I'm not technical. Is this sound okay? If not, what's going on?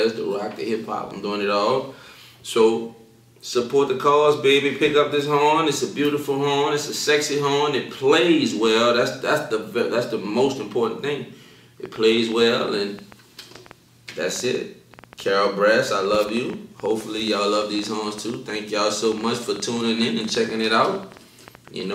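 No. From 11.86 s to the end at 21.94 s there's a train of clicks: around a hundred similar ticks, about 8 per second at an uneven pace, heard over the sound and in pauses. Unlike one stray pop, they keep repeating, likely from electrical interference or a loose connection.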